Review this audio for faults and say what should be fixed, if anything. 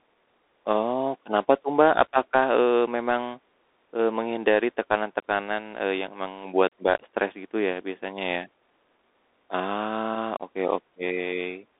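The whole clip carries the sound of a Bluetooth CVSD headset codec. The band runs from about 300 Hz to 3.7 kHz, and nothing gets through above 3.8 kHz. The speech sounds narrow and boxy. The coder sends one up-or-down bit per sample, which fits a 64 kbps stream. Its step size can't keep pace with loud, fast high sounds, so they distort. The s sounds turn scratchy. A granular hiss sits under the voice. The damage is plainly audible. To prevent it, record on a wired or wideband-capable microphone instead of the headset's call profile.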